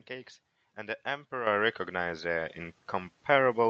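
Speech whose level jumps twice: at 1.47 s everything, voice and room alike, leaps up by about 8 dB, then again at 2.49 s by about 4 dB. That is the microphone volume stepped up, the call software raising the input gain in discrete steps. The call path itself carries sound topping out near 8 kHz, which fits a wideband Opus setting.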